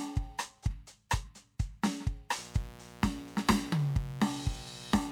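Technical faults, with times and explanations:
2.37–5.12 s, mains buzz: a raspy 60 Hz buzz, roughly 20 dB below the music, from sharp switching spikes twice per mains cycle spreading harmonics into several kilohertz.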